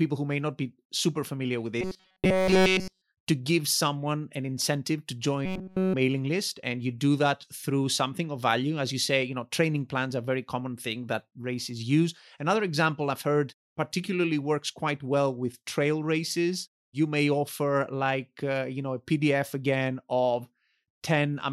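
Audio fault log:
1.81 to 3.02 s and 5.46 to 5.94 s, robotic sound from repeated short buffers: the speech collapses into a rigid metallic buzz at 188 Hz, with essentially all the real audio skipped. The likely cause is a roughly 5.3 ms buffer played over and over while new data fails to arrive.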